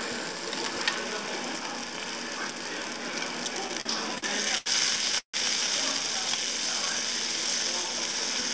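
From 3.68 to 4.68 s the sound drags and stutters through six short holds, the longest 81 ms. These are repeated stalls (stutter): late packets kept emptying the jitter buffer, and about 198 ms was filled in, with nothing lost.

At 5.19 to 5.36 s the sound hangs as a fading continuation, then drops to about 100 ms of silence. This is a call audio freeze, likely from packets held up in transit, inserting a 149 ms gap.

From 8.05 to 8.49 s the sound rushes at 112% speed with unchanged pitch. This is a jitter buffer speed-up: the receiver trimmed roughly 50 ms of pitch-period pieces to shrink excess buffered delay. Throughout, nothing is heard above 8 kHz, which fits the G.722 call codec.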